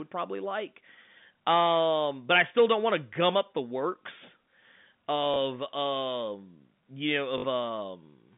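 At 5.34–5.36 s and 7.38–7.44 s there's packet loss with the last packet repeated: a 20 ms hiccup, then a 60 ms robotic stutter buzzing around 50 Hz.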